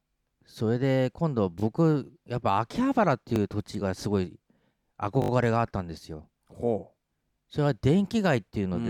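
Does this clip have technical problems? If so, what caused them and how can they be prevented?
Yes, there's a repeated buffer fault in this speech: playback ran dry and replayed its last chunk, which fits a 20 ms buffer. You hear brief clicks at 1.60–1.62 s and 3.36–3.38 s, then a short buzz at 5.22–5.30 s. A bigger playback buffer would prevent it.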